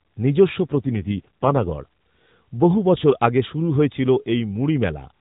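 A speech clip carried over an AMR narrowband mobile link, with content stopping at 4 kHz throughout. From 0.67 to 1.70 s there is an AMR rate drop: the voice turns rougher, buzzier and more synthetic, consistent with the codec stepping down from about 12.2 to 5.9 kbps, then clears. On a spectrogram the band edge and continuity stay unchanged with no gap in the waveform, but harmonics look smeared and blotchy in that span.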